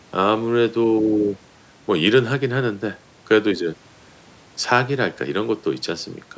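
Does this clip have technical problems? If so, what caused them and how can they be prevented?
No, there are no technical problems in this audio.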